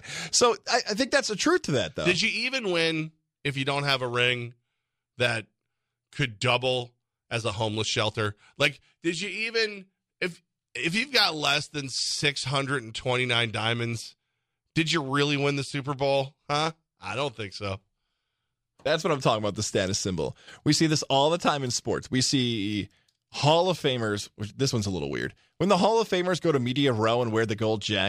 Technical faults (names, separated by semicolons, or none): none